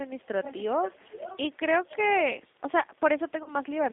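Speech here runs through a G.729 codec from start to finish, and the damage is plainly audible. The voice sits in a narrow telephone band of roughly 200 Hz to 3.7 kHz, so it's thin with no air on top. There's a slightly rough, synthetic edge, because the decoder rebuilds each 10 ms frame from a vocal tract filter, a pitch predictor and a handful of pulses, all of which points to an 8 kbit/s G.729-family coder. Then at about 3.43 s there's a dropout with VoIP packet loss concealed by the speech codec. About 30 ms of audio is missing, consistent with a single lost packet. The decoder fills the gap by stretching its last pitch and filter settings while turning the gain down, so you hear a brief stretched, fading smear instead of silence. Because each frame builds on the previous one, the voice stays a bit weak and off until about 3.51 s before recovering.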